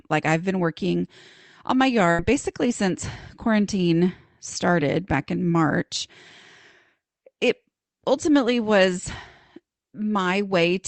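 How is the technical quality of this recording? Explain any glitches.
The recording has one clear glitch, a burst of packet loss at 2.11 to 2.21 s, heard through the coding texture of a call codec. A run of packets failed to arrive in time after "been working on my", so the receiver extended and faded the last sound for about 70 ms. It comes out as a brief held, decaying smear, and about 80 ms of audio is skipped before "basically since quarantine started".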